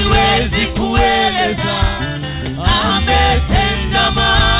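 No technical faults are audible.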